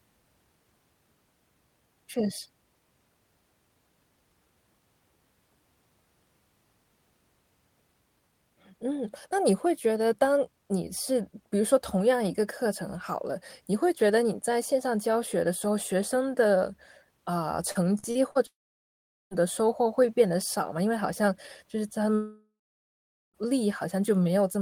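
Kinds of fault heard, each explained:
Repeated packet loss (robotic sound): 17.71 to 18.38 s, four short gaps of up to 41 ms are each patched by repeating the last sound, making speech choppy and robotic.
Long network dropout: 18.47 to 19.34 s and 22.15 to 23.37 s, speech fades into about 0.8 s of silence, likely from audio never arriving; the missing stretch is lost.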